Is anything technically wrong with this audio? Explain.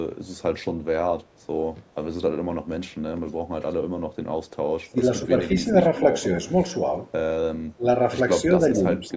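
Yes. Twice the speech briefly sinks, first from 4.84 to 4.99 s with a deep dip of around 20 dB, then from 7.77 to 7.85 s by roughly 15 dB. This is likely speech suppressed in double talk: with both sides talking, the echo canceller mistook this talker for loudspeaker echo and turned the signal down.

From 8.96 to 9.12 s a faint copy of the sound returns 229 ms late, some 25 dB below the speech. This is likely an echo leak: the far end's loudspeaker reached its microphone, and its echo canceller let part of it back.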